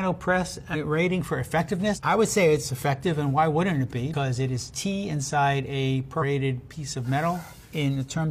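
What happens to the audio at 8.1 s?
Nothing goes wrong at 8.1 s; the audio is intact at that moment.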